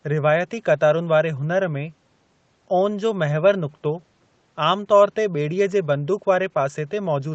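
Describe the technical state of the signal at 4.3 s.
At 4.3 s the speech is intact, with no fault audible, only the usual call-path band limit that leaves nothing above 8 kHz.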